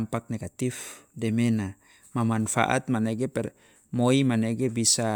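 No audible technical faults here.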